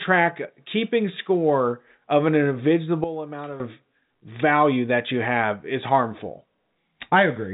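At 3.04 s a sudden gain jump drops speech and background noise together by about 12 dB until 3.6 s, likely an unramped setting change; unlike a fade, the step is instant.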